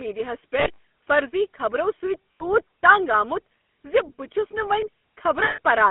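Speech heard through the GSM full-rate codec, with a buzzy, gravelly roughness throughout and a band of about 200 Hz to 3.5 kHz. The texture fits 13 kbit/s full-rate GSM, whose pulse-driven vocal-tract model causes that roughness, not simple band-limiting, which would only sound muffled. Lost GSM frames occur from 0.6 to 0.84 s, scattered in short runs just before "فرضی خبرو", then from 2.32 to 2.44 s and from 5.44 to 5.6 s. Each gap is filled by repeating the last good frame. The result is a rough metallic ring instead of the clean silence or click of a plain dropout.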